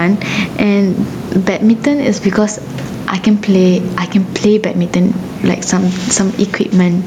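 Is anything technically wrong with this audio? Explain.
Yes, there's gain pumping running through the whole speech clip. The room noise sits about 32 dB below the speech, and the gain swings by around 10 dB. The likely cause is the mic gain set far too high with a fast limiter or compressor clamping down on each loud moment, so loud and soft passages get squeezed together and the speech sounds flattened.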